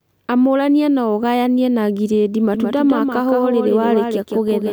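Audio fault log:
2.55 s to the end, doubled audio track: the speech suddenly picks up a second, quieter copy of itself trailing around 150 ms behind, roughly 5 dB below the original, so every syllable gets a hard, flat slapback with no decay or room colour. It cuts in abruptly and runs until the end. The likely cause is the same signal being mixed in a second time through a slower path or an out-of-step edit.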